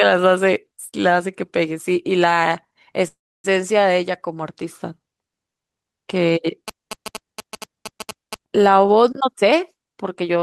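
A speech recording carried over a call link, whose highs stop near 12 kHz as expected for an Opus call codec, has three faults. From 3.07 to 3.46 s there is a call audio freeze: the last sound is stretched into a fading buzz or hiss that drops to silence for about 290 ms, and then the speech resumes exactly where it stopped, with nothing lost. That pattern points to packets likely held up in transit and an emptied jitter buffer. A dropout would skip content instead. From 6.68 to 8.35 s, GSM signalling bursts appear as a galloping dit-dit-dit of short 217 Hz buzzes, somewhere around 10 dB below the speech. A nearby 2G phone's radio bursts are being rectified by the audio circuit. Steady mains hum lacks that rhythmic on-off gallop. From 9.17 to 10.36 s, a jitter buffer speed-up makes the speech run at 127% speed with unchanged pitch, as tiny pitch-period slices totalling roughly 300 ms are cut to shed delay. 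Tape-style speed-up would raise the pitch as well.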